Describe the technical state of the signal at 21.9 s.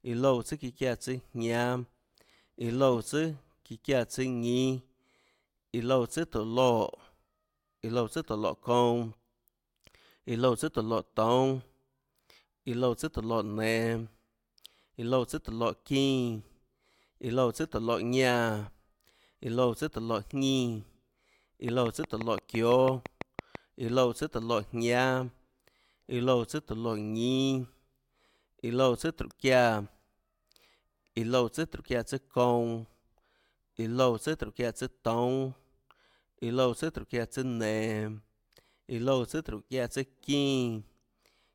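Regular ticking, 5.89 clicks per second, sits over the speech from 21.69 to 23.56 s: a train of clicks, likely interference injecting repeated pulses.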